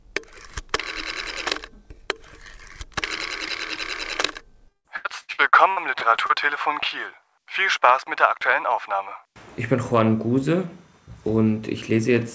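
Around 3.48 to 3.51 s, and again from 3.75 to 3.78 s, there are two short concealed packet losses. Each time a bit of audio didn't reach the decoder in time, and what you hear fits a single 20 ms packet going missing. The receiver bridged the hole by stretching the last sound forward and easing back into the real signal, so you get a quick smear or wobble rather than a clean gap.

From 4.68 to 6.31 s it turns into repeated packet loss with that robotic sound. The dropouts keep coming, which fits about nine separate gaps, the longest around 160 ms, and roughly a third of that stretch is filled in. Each patch extends the previous sound before the next hole arrives, so it comes across choppy and robotic, with chunks missing. The G.722 call path underneath also caps everything at 8 kHz, which you can hear as a dull top end.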